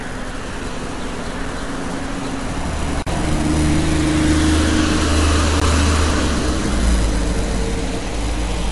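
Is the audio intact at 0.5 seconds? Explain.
No. Transcoding between lossy codecs affects the audio at 0.5 s, as it does throughout. Nothing is heard above 11.2 kHz, and two different sets of compression artefacts sound together. This likely comes from an MP3 encode re-encoded as AAC-LC, both fitting about 48 kbit/s.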